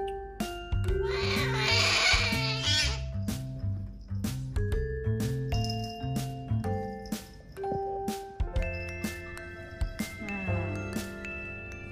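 Faint clock slip clicks tick steadily from 0.16 to 11.87 s, around 150 of them at roughly 70 ms spacing. The pattern fits single-sample slips from a clock mismatch of a few hundred ppm, likely between two unsynchronised devices. Unlike random crackle, these ticks keep an even rhythm.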